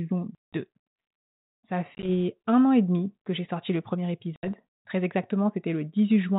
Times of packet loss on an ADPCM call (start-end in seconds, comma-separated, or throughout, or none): 1.95-2.09, 4.36-4.49